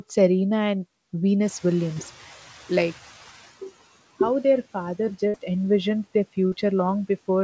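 At about 1.5 s the room noise jumps by about 12 dB, and the noise suppressor catching up lags it: from 1.45 to 3.52 s the hiss comes through with less reduction at first, then sinks by about 12 dB as the estimate adapts over roughly two seconds. Inside that stretch, at 1.94 to 1.98 s, a short concealed packet loss leaves a 20 ms hole that the receiver fills by extending the last sound, heard as a brief smear. From 5.28 to 5.36 s a burst of packet loss drops about 60 ms between "how their father" and "envisioned their", so the continued sound fades before the audio resumes further on. At 6.48 to 6.53 s, after "envisioned their", another short concealed packet loss patches a 40 ms gap, giving a brief wobble. The band stops at 8 kHz, which fits a G.722 call codec.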